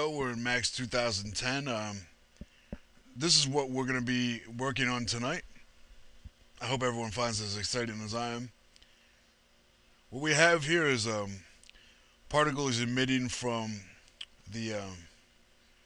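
No technical faults can be heard anywhere in the clip.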